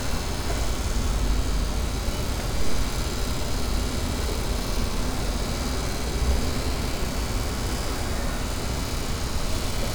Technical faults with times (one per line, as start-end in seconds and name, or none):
none